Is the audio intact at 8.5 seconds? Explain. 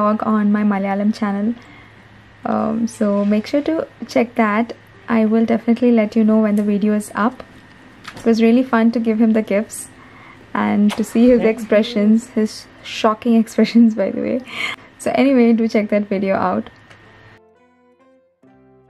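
Yes, at 8.5 seconds the audio plays through intact, with no dropout, click, distortion or other audible fault.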